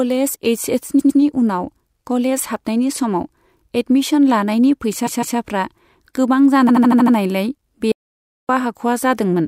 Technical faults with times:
0.98-1.19 repeated frames
5.06-5.37 repeated frames
6.68-7.15 repeated frames
7.92-8.49 audio dropout to silence

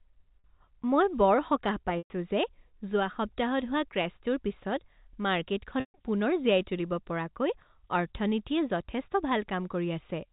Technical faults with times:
0.40-0.44 packet loss with pitch repetition
1.98-2.10 packet loss with pitch repetition
5.80-5.94 packet loss with pitch repetition

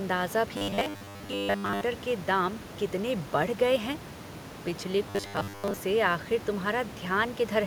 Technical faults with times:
0.57-1.83 robotic sound from repeated short buffers
5.10-5.77 robotic sound from repeated short buffers

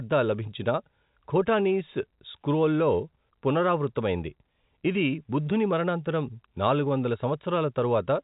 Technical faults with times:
none

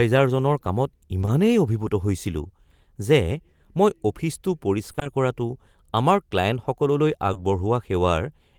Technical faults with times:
1.21-1.29 short concealed packet loss
4.91-5.07 repeated packet loss (robotic sound)
7.33-7.37 short concealed packet loss

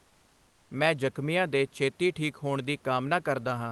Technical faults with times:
0.00-0.69 comfort noise in place of the background

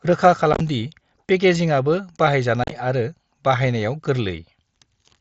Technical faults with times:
0.53-0.61 unconcealed Bluetooth headset packet loss
2.64-2.71 unconcealed Bluetooth headset packet loss

